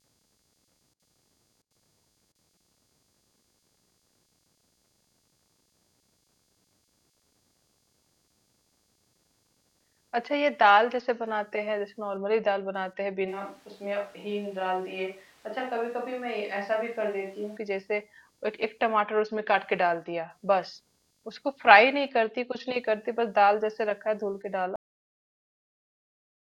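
Speech runs through this recording with a faint computer activity noise underneath it from start to finish: a buzzy, chirping texture pulsing at around 200 times a second and sitting roughly 45 dB below the voice. It comes from processor or graphics load disturbing the ground the audio circuit shares with the computer. Unlike mains hum, it does not hold a steady tone but changes with what the machine is doing, and it never follows the speech. From 13.30 to 17.56 s the voice abruptly turns hollow and roomy, with thinner bass, a level drop of a few dB and noticeably more background noise, then snaps back just as suddenly. This is likely a switch to a distant microphone, such as a camera's, taking over while the close one dropped out. The instant change in both directions sets it apart from someone simply turning away from the microphone or a gradual fader move, which would shift the tone smoothly. 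At 24.76 s the clip has a cut-off end: the audio stops mid-sound and falls straight to digital silence with no decay or room tail, because the final buffers were never written. A fade-out or a natural pause would taper off or keep some background noise, whereas this ends dead.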